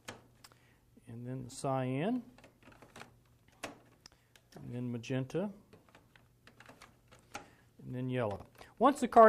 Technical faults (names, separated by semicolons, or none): chunks out of order